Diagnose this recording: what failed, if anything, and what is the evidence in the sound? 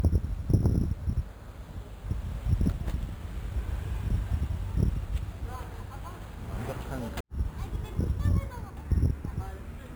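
Imaging from sample-and-hold upsampling, at the resampling stage. A metallic fizz between 5.5 and 11 kHz, about 31 dB down, tracks the sounds throughout. The 11 kHz source was upsampled without filtering.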